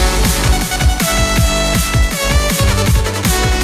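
From start to end, a doubled audio track: a second full-band copy trails by roughly 0.4 s, a few decibels quieter, likely from a slower capture path.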